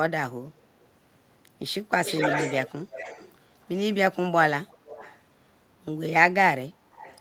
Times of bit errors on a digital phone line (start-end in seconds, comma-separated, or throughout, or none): none